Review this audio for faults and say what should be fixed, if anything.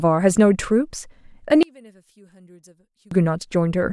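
From 1.63 to 3.11 s the speech drops to a faint trace, about 33 dB down, its centred body nearly gone. The likely cause is one channel inverted, so the shared signal cancels when summed to mono. Check channel polarity before any mono fold-down.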